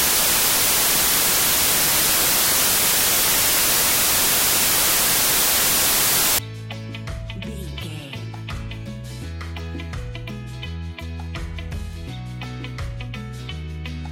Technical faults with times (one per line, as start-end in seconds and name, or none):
0.00-6.38 samples built from the wrong bytes